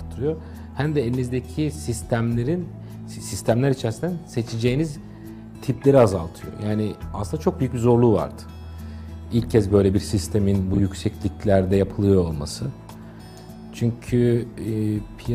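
At 10.73 to 10.79 s, frames out of order: two adjacent 23 ms blocks play swapped, giving a brief garbled flutter, but unlike a dropout, no time is lost.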